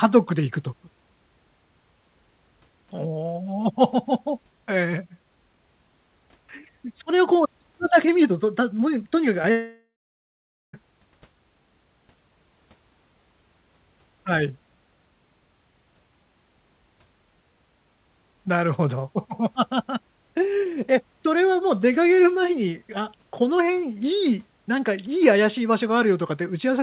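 Speech in a narrowband call, band-limited at 4 kHz in a way that fits G.711 mu-law. At 9.42 s a brief smear lasts about 34 ms: short concealed packet loss, where roughly 20 ms of audio arrived too late and the decoder bridged the gap by extending the preceding sound before blending back. Moments later, from 9.51 s to 10.75 s, the sound trails off into a fading continuation and then about 0.85 s of silence before resuming with material missing. This is likely a long network dropout, with over a second of packets lost and concealment giving out.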